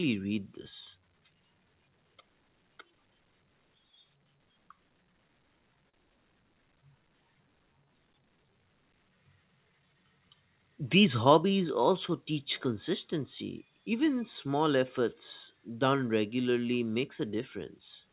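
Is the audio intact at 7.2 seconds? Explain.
No. At 7.2 seconds the audio is inside a jitter buffer slow-down that runs from 6.54 to 8.54 s. The receiver's buffer was low, so it stretched the sound to rebuild its reserve. It repeated single pitch periods and small pieces of pause, adding 109 ms over those two seconds. Playback runs at 95% speed with the pitch unchanged. Sounds feel slightly drawn out, and there may be a faint warble.

The same moment also falls within a stretch of scattered short gaps, from 6.81 to 8.10 s. A few packets, about four, went missing or arrived late at separate points. Each hole was filled by carrying on the last sound. Roughly 30 ms was patched in total, and the longest gap was only about 10 ms. These fills are heard as brief ticks or tiny hiccups against otherwise clear sound. All of this plays through the G.711 call path, which stops at 4 kHz.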